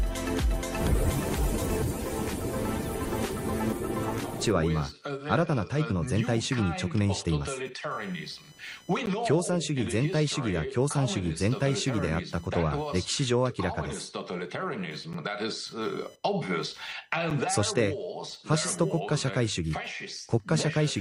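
A faint buzzing chirp, pulsing at around 1 kHz and sitting roughly 30 dB below the sound, runs through the whole clip. This is computer activity noise: processor or graphics load shifts the shared audio ground, so the buzz follows the machine's activity, not the sound.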